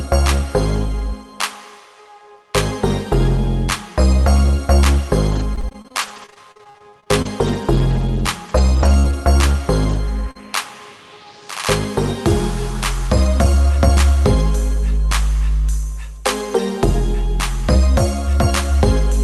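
From 5.31 to 9.13 s the audio suffers repeated packet loss, giving a robotic sound: about twenty holes, none longer than 45 ms, each patched by extending the previous sound. Around half a second in total is rebuilt, roughly an eighth of the stretch, so the result is choppy. This differs from a single concealment because the holes keep recurring.

At 9.89 to 9.91 s and again at 9.93 to 9.95 s, a lost packet was rebuilt from error correction. The following packet carried a low-bitrate Opus copy of each 20 ms frame, so nothing drops out. Those two frames simply turn briefly grainier and noisier, rather than smearing or stuttering.

From 10.31 to 10.37 s comes a short concealed packet loss. About 40 ms never arrived, and the decoder filled it by continuing the last sound before blending back. It is heard as a brief smear or wobble. Unlike the rebuilt frames, nothing real was recovered here, only an estimate.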